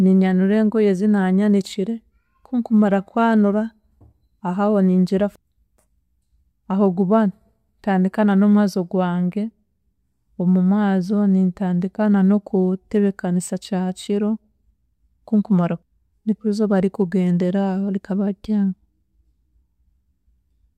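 From 0.11 s to 20.76 s a faint, steady rattle sits under speech, one tick roughly every 20 ms, vanishing in pauses. These are clock slip clicks, likely from two unsynchronised clocks about a thousand parts per million apart, dropping or repeating single samples.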